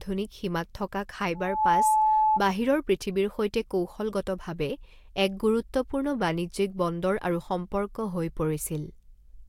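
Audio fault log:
1.35–2.40 s, loudspeaker feedback squeal: a steady 865 Hz tone swells over roughly a third of a second to about 5 dB above the speech, then stops. A microphone picked up its own loudspeaker, and the loop gain at that frequency exceeded one.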